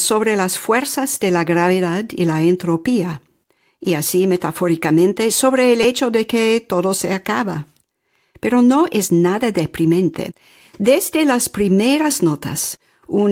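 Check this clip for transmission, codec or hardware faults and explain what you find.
Two faults are present: a repeated buffer near 5.8 s and a lost packet rebuilt from error correction around 9.0 s.

At 5.83 s there is a repeated buffer. New audio did not arrive in time, so the output kept replaying the most recent block, which fits a 5 ms buffer, three extra times. Each repeat ends with a hard join, and with so short a block the result is a brief buzzy click rather than an audible stutter. About 15 ms of the actual speech never played.

From 9.03 to 9.09 s is a lost packet rebuilt from error correction. The pattern suggests two lost packets. Each was recovered from the low-bitrate backup copy (Opus in-band forward error correction) carried in the packet that followed it. Because the decoder filled about 40 ms of speech from those reduced copies, there is no dropout. That stretch sounds rougher and noisier than the audio around it.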